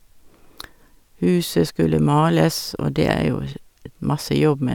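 No technical faults are audible.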